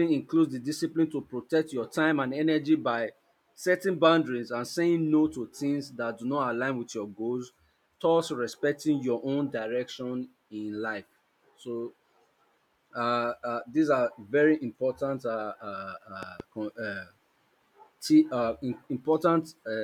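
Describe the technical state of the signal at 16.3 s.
A loud pop sits across 16.23 to 16.42 s, heard as two sharp pops in quick succession rising a few decibels above the speech, which carries on underneath. The likely cause is a sudden voltage step or pulse entering the chain, as from a plug, a switch, static discharge or a driver glitch. The downstream circuitry then shapes each pulse into a brief thump-like transient that rides on top of the signal.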